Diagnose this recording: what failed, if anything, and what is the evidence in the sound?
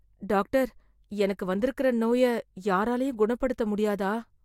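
Nothing failed; no stage of this recording shows trouble.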